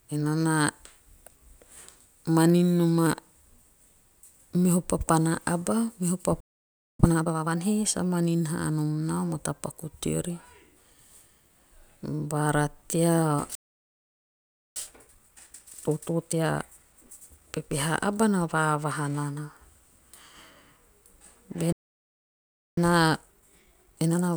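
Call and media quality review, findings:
Playback stall, 6.40 s: speech cuts out mid-flow after "meho papana aba meho", silent about 0.59 s, then resumes. Likely buffer underrun or blocked player thread, output starved until data returned.

Playback stall, 13.55 s: silence about 1.2 s, resumes at 14.76 s. Likely same player starvation, longer recovery.

Playback stall, 21.72 s: silence about 1.05 s, back at 22.77 s. Likely same mechanism.

Time-compressed catch-up, 7.00–7.58 s: hurried speech at normal pitch, running at 2x until "he sa manin haa". Player draining backlog after first stall by cutting out and cross-fading short segments.

Time-compressed catch-up, 14.76–17.76 s: milder rush at 1.25x, same pitch, ending before "aba na vaavaha nana". Backlog reduction after second stall.

Time-compressed catch-up, 22.77 s to end of clip: 1.25x hurried speech, pitch unchanged. Still catching up when audio ends.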